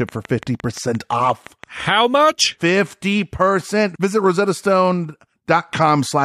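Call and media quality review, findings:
Train of clicks, 0.09–1.81 s: about ten similar pulses at a steady 5.8 per second, about 5 dB over the speech. Regular spacing, unlike crackle. Likely interference from nearby equipment.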